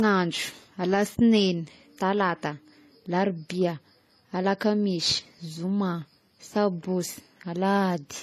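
Across the whole speech clip there's nothing above about 14.1 kHz, with layered artefacts that point to likely transcoding between lossy codecs, probably AAC then MP3.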